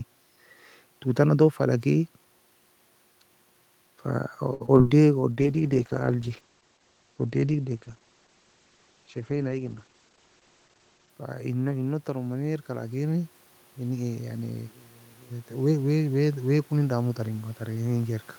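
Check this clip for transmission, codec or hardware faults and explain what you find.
Five kinds of transmission fault are audible in this speech clip, clustered around the packet trouble near 4.5 s, then a long stretch of low-bitrate coding, a burst of time compression, and two gain ramps.

Short stall from a late packet, 4.53 to 4.62 s: a packet missed its playout deadline and the jitter buffer ran dry, so the receiver held the last sound for 66 ms until it arrived. Nothing is lost, but the sound drags, and playback ends up 66 ms later.

Short concealed packet loss, 4.66 to 4.70 s and 4.78 to 4.95 s: about 20 ms of audio failed to reach the decoder each time. The receiver extrapolated 16 ms from the preceding sound and crossfaded back, with the second repair adding roughly 15 ms more. These are heard as quick smears or wobbles where consonant detail can disappear.

Call bitrate drop, 5.32 to 11.18 s: the bandwidth estimate fell and the encoder was cut from 48 to 11 kbps, with audio bandwidth narrowing from 20 kHz to 8 kHz. 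For nearly six seconds the speech sounds muffled and watery, losing its crisp top end. A level change near 7.5 s inside this stretch is the talker moving, not the link.

Jitter buffer speed-up, 9.59 to 10.13 s: an overfull buffer was drained by cutting out pitch-period slices, about 70 ms in total, so the speech plays at 111% speed with unchanged pitch and comes across as briefly rushed.

Automatic gain rising, 11.47 to 14.36 s and 15.28 to 18.30 s: the gain control judged the input too quiet and raised it by about 4 dB each time over a few seconds. The speech and the room noise behind it swell together.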